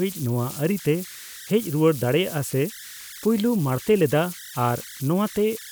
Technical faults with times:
0.00-5.72 converter idle tones

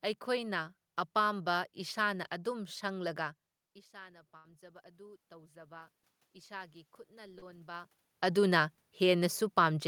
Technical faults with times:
3.61-5.94 automatic gain rising
4.37-4.45 burst of packet loss
6.46-8.76 automatic gain rising
7.38-7.43 short concealed packet loss
8.22 short concealed packet loss

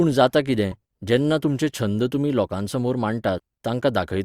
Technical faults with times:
3.35-3.40 damaged data in a compressed stream

